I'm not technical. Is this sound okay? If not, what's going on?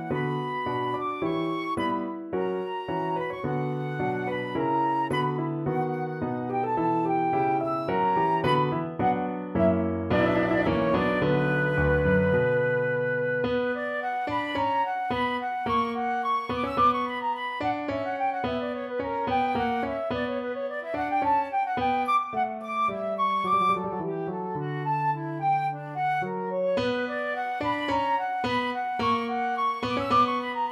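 Yes, nothing wrong turns up anywhere in this recording, so there is nothing to fix.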